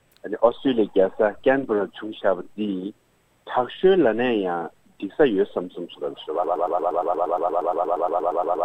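A broken-record loop starts at 6.44 s: a 117 ms fragment repeats back to back about 19 times until the end, likely from a stalled player or stream.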